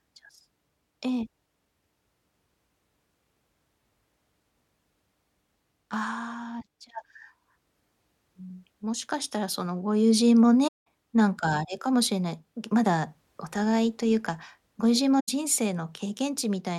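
At 10.67 s the speech drops into a gap of about 192 ms. This is AAC frame loss with muting. The decoder got no data for that stretch, which fits about nine lost frames, and zeroed its output. The overlapping windows fade the sound out and back in, so the hole has soft edges. At 15.19 s a shorter gap of about 85 ms follows, pointing to about four lost frames.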